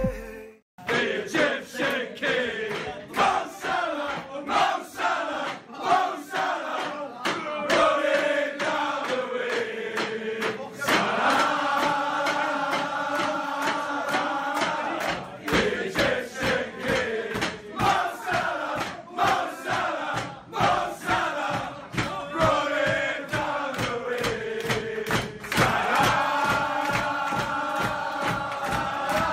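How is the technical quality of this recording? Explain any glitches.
Nothing here trips me up: I can't hear any glitches, dropouts or other technical hiccups anywhere in the recording.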